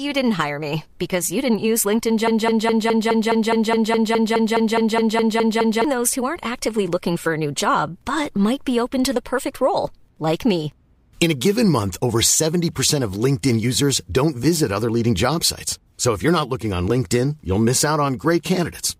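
Speech, with a broken-record loop from 2.28 s to 5.85 s: a 0.21 s fragment plays 17 times back to back, identical each pass, and the speech that belonged in those three and a half seconds never arrives. This is likely a stalled player, encoder or stream resending the last buffer it held. Unlike an echo, the repeats don't decay or overlap the ongoing sound; each copy is full level and replaces it.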